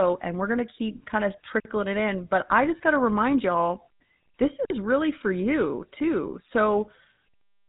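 From start to end the speech carries the artefacts of the GSM full-rate codec, and the damage is plainly audible. The codec models the vocal tract and drives it with a sparse pulse excitation, which leaves a buzzy, gravelly roughness on every voiced sound. A spectrogram shows a hard ceiling at about 3.9 kHz with nothing above it and smeared harmonics below. The sound fits a 13 kbps coding rate.

At 1.60 s, just after "to keep kind of", there is a gap between chunks: 50 ms of silence before "it in" resumes. The audio appears to have been delivered in pieces of about 3 s, and this join was filled with dead air. Nothing is lost, but the sound stops abruptly and restarts. On a waveform it shows as a flat, empty strip with hard vertical edges, and on a spectrogram as a clean blank column.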